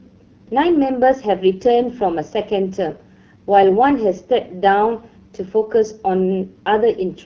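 From start to finish the speech sounds rough and raspy, with a grainy, buzzing edge and a dull top end, since nothing reaches above about 6.8 kHz. This is AMR wideband (HD Voice) codec damage. The codec models speech up to 6.4 kHz from a pulse-excited vocal tract and fakes the band above with shaped noise. The coarseness here fits one of its lowest rates, around 8.85 kbit/s, where too few bits remain to rebuild the voice smoothly.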